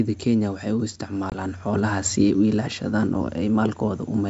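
Packet loss on an ADPCM call hits this speech clip at 1.30 to 1.33 s. A 20 ms hole, about one packet, drops to silence, and the speech returns slightly distorted while the decoder's predictor and step size resynchronise. The G.722 wideband coding around it is clear up to 7 kHz.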